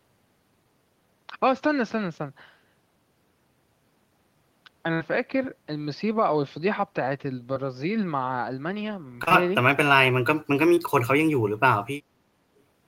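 At 4.93 to 5.02 s a burst of packet loss removes about 60 ms of the speech. The receiver holds the last sound for roughly 67 ms and fades it out, then the speech resumes further on with that stretch missing. It is longer than the later dropouts.

Short concealed packet loss follows at 7.54 to 7.58 s, at 9.24 to 9.32 s as two losses back to back, and at 10.74 to 10.78 s. Each time about 20 ms fails to arrive, and the decoder bridges the hole for 15 to 30 ms, so each sounds only like a brief smear or wobble rather than a held, fading sound.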